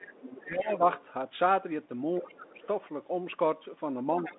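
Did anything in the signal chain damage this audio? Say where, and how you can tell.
Yes. Under the talker there's a fainter second voice, about 20 to 30 dB down, at 0 to 0.73, 0.97 to 1.03, 2.25 to 2.67 and 4.21 to 4.36 s. That's the other side's voice leaking through, likely loudspeaker echo the call processing's canceller didn't fully remove.

Also in call processing, the talker dips by up to about 15 dB at 0.33 to 0.86, 2.18 to 2.63 and 4.28 to 4.39 s, overlapping those echo patches. That's speech suppressed in double talk, likely the canceller turning both sides down.

On the codec link, 0.51 to 0.57 s has pops and a rough burst with brief level jumps. Those are bit errors on an ADPCM link: each flipped bit upsets the decoder's step size and predictor, so the damage rings on for some milliseconds.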